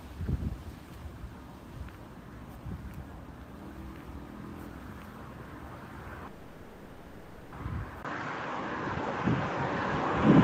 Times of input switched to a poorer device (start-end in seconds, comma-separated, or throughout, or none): 8.03-10.43